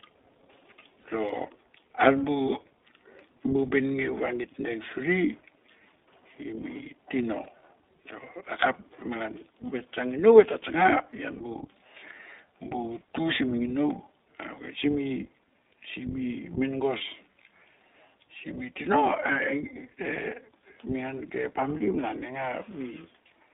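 iLBC codec damage runs through the whole of this speech clip. The audio is confined to a narrow telephone band of roughly 300 Hz to 3.6 kHz and has a plainly audible rough, synthetic edge. The sound fits iLBC's 15.2 kbps mode with 20 ms frames, each coded independently. Lost iLBC frames cause three brief dropouts, at 1.02 s, 7.44 to 7.46 s and 16.98 to 17.01 s. In each one, the decoder papers over the missing packets by repeating the last pitch cycle blended with noise, which produces a short, buzzy, held vowel of about 40 ms in the first instance and 20 ms in the other two. The voice snaps back almost at once afterwards.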